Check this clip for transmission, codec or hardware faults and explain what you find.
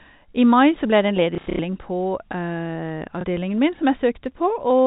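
There's one transmission fault here, packet loss with the last packet repeated, showing up twice over a G.711 telephone-band path. From 1.35 to 1.59 s, about 180 ms of audio goes missing in scattered gaps, the longest about 90 ms. Each gap is filled by replaying the previous chunk, which fits 30 ms packets. The runs buzz at roughly 33 Hz, a short robotic stutter. A single 30 ms hiccup follows at 3.21 s.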